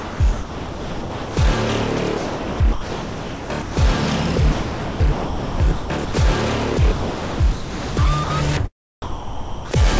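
Four stretches sound chopped by the voice detector: 0.00 to 1.37 s, 2.18 to 3.77 s, 4.52 to 6.14 s and 6.92 to 7.97 s. The sound breaks up inside each one. Gaps give way to a smooth, even hiss, then real sound returns. Most of each stretch is lost, about 1.25 s, 1.35 s, 1.23 s and 0.93 s respectively. The likely cause is a sender's voice detector switching transmission on and off, with the receiver filling in standard comfort noise.

Two later faults are sound dropped by the voice detector. From 8.24 to 8.30 s, 60 ms of sound vanishes under that same synthetic hiss. From 9.02 to 9.71 s, the sound stops for 0.69 s and steady noise takes its place. Each time, the likely cause is the detector mistaking quiet sound for background and ceasing to send it. The audio, which carries nothing above 8 kHz, resumes once the detector triggers again.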